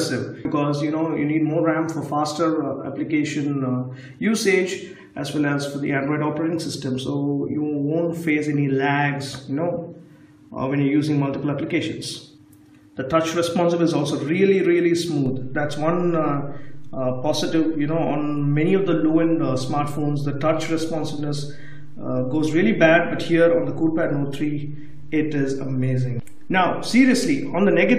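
At 15.26 s a DC step shifts the waveform's zero line by about -29 dBFS, as if an offset input were switched in, and the offset holds to the end. One low thump marks it, but unlike a dropout or pop, the sound carries on unbroken.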